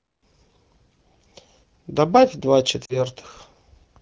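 At 2.85 to 3.01 s you get lost AMR speech frames, roughly two 20 ms frames' worth. The wideband decoder reuses the last good frame's settings with falling gain, so the sound drops to near silence within two frames and the voice comes back weak or rough for a moment.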